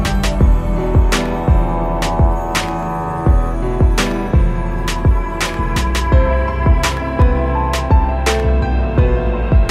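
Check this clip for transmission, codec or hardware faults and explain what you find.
Two brief clicks, at 4.41 s and 7.22 s, most likely dropped samples. At each point a tiny fraction of a millisecond of the stream went missing, so the waveform jumps abruptly to a later value. The gap removes no audible sound but leaves one sharp, isolated click.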